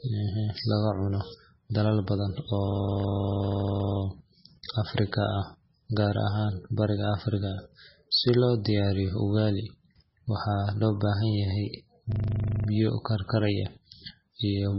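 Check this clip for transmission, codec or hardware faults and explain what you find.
Two kinds of fault are present in this speech: heavy compression damage throughout, and two system hang loops.

Throughout, nothing is heard above 5.6 kHz, and the sound is watery and swirly, with chirpy sibilants and smeared attacks. The likely cause is MP3 compression at a very low bitrate, which fits about 16 kbps. The encoder ran short of bits, so it cut the treble at a fixed point and let weak frequency lines flicker on and off between frames. Random noise or band-limiting alone would not swirl like this.

From 2.68 to 4.0 s, and again from 12.12 to 12.68 s, a 40 ms fragment repeats exactly, 33 and then 14 times. This is a system hang loop: the driver froze while the hardware kept replaying one ring buffer. The result is a steady 25 Hz buzz. A stuttering dropout would have gaps, but here the same piece of audio repeats, and speech resumes without any obvious loss.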